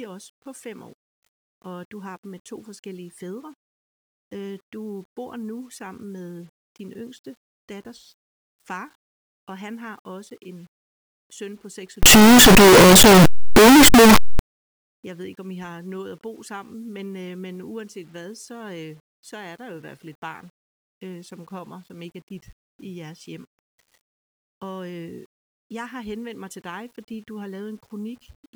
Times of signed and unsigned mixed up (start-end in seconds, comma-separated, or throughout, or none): 12.03-14.39